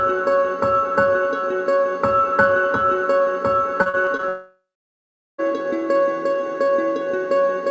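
Audio carried over a call path, band-limited with nothing above 8 kHz, which fits a G.722 wideband codec. From 3.82 to 4.24 s there is repeated packet loss with a robotic sound. Five short holes, the longest about 38 ms, are each patched by stretching the preceding sound, so roughly 29% of that span is synthetic filler and the sound turns choppy and robotic. What marks this as scattered loss rather than one outage is that real audio keeps returning between the patches. At 4.28 s a long network dropout follows, most likely a stall in the network delivery. The last sound is extended into a decaying buzz or hiss, then about 0.77 s of near-silence follows, and audio resumes at 5.40 s with roughly 1.1 s of material gone. Unlike the choppy stretch before it, nothing genuine arrives during this gap, and the continuation fades out completely instead of alternating with real audio.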